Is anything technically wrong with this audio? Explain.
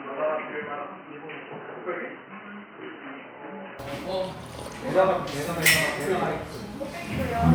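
Yes. From the start to 3.79 s the sound is dull and boxy, with nothing above 3 kHz, a few decibels quieter, and carrying a faint background noise of its own, well below the signal. At 3.79 s it opens up abruptly with no gap. This is likely an input switched to a poorer device: the recording began on a narrower-band microphone or headset call profile, then moved to the better input mid-recording.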